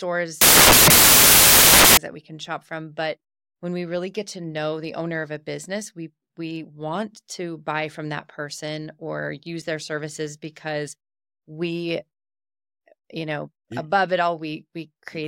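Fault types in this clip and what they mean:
Samples built from the wrong bytes: from 0.41 to 1.97 s, just before "that we can shop", misassembled bytes turn the speech into loud broadband noise, with a uniformly bright spectrogram.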